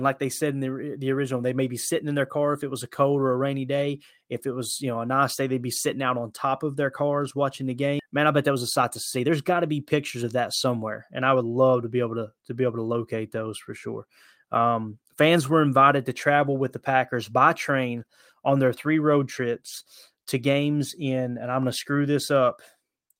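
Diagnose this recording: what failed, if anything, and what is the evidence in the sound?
Skip ahead at 7.99 s, in the network jitter buffer: roughly 0.7 s of speech is dropped. The waveform splices straight across with no silent gap.

Jitter buffer speed-up from 8.10 to 11.72 s: the buffer trims pitch periods, so playback runs 109% fast at unchanged pitch. The spectrogram shows compressed syllables with steady harmonic spacing.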